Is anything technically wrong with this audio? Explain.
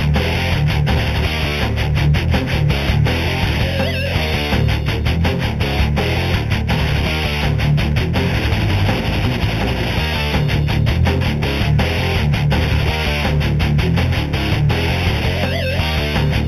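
Yes. Throughout, there is imaging from linear upsampling: the audio sounds as if it was raised from an 8 kHz rate by joining samples with straight lines, a weak filter. Above the 4 kHz original band edge, a faint mirrored copy fills 4 to 8 kHz, roughly 20 dB down, heard as light metallic shimmer on bright sounds. On a spectrogram, it appears as a dimmer reflection of the content below.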